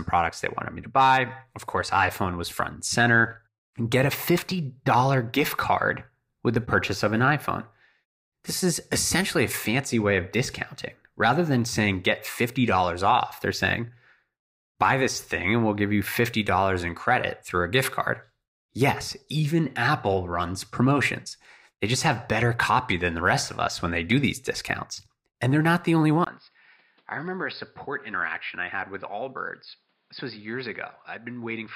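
Input likely switched to a poorer device at 26.25 s: after a 20 ms gap, speech turns dull, cut above 5.2 kHz, about 10 dB quieter, over faint new noise.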